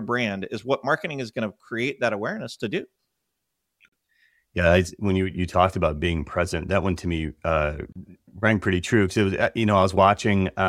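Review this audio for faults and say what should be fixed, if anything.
Gaps at a join of encoded pieces occur at 3.89–3.92 s (39 ms) and 7.92–7.96 s (32 ms), four seconds apart. Untrimmed encoder delay and padding leave silence. Trim encoder delay and end padding before joining, or encode continuously.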